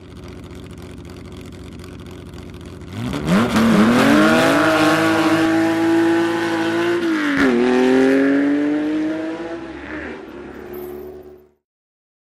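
From 3.38 s to 5.46 s there is a doubled audio track: a second, full-band copy of the sound trails the original by roughly 400 ms at about 5 dB lower, with no decay or room colour, likely from the same signal being picked up again through a slower path. It starts and stops abruptly. On a waveform the envelope repeats slightly smaller a fixed distance later; on a spectrogram every feature reappears as a fainter duplicate shifted right.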